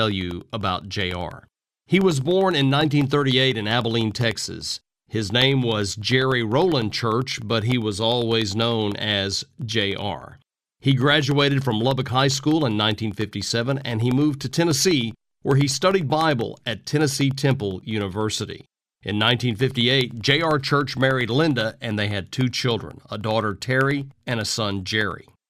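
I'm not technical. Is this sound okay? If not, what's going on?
No, there are periodic USB or driver dropouts: from 0.11 s to 25.4 s, a tiny sliver of speech drops to silence ten times a second, giving a steady ticking.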